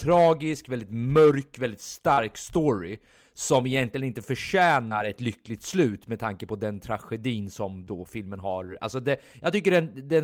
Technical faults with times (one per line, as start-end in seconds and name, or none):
2.13-2.19 short concealed packet loss
4.89-4.93 short concealed packet loss
7.85-7.89 short concealed packet loss
8.67-8.70 short concealed packet loss